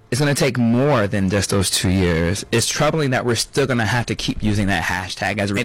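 Hard clipping runs through the whole of this speech clip: the level was pushed roughly 10 dB past what the converter or number format could carry, so around a tenth of the samples hit the ceiling and are sliced flat, and those squared-off peaks spray high harmonics that give every loud syllable a harsh fuzz. Damaged data in a compressed stream appears from 5.53 to 5.58 s, where corrupted bytes in the encoded file leave the decoder misreading frames and hunting for the next frame header, producing a short blip.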